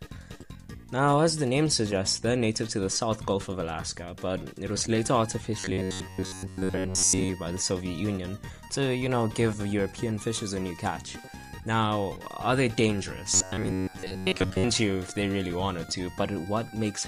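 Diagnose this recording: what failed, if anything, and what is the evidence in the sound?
Robotic sound from repeated short buffers at 5.60–7.33 s and 13.34–14.64 s: a rigid metallic buzz near 93.8 Hz, likely the driver or buffer stage looping its last 10.7 ms while most fresh audio is skipped. Unlike dropouts, there are no silent gaps. Instead, a constant imposed pitch gives it away.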